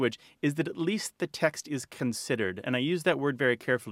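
No technical faults can be heard anywhere in this speech recording.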